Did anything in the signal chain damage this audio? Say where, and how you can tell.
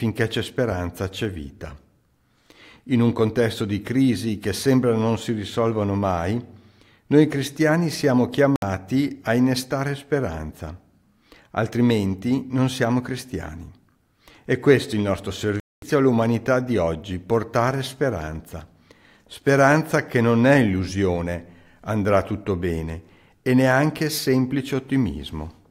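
Yes, there's a digital broadcast dropout at the reception end, before decoding. The sound mutes abruptly at 8.56 s for about 64 ms, then again at 15.60 s for about 224 ms. Both gaps are clean silence with nothing smeared across them, so the receiver lost the signal or rejected corrupted frames and muted until good ones arrived. The gap lengths fit whole 32 ms frames, roughly two and then seven, and that stretch of programme is simply gone.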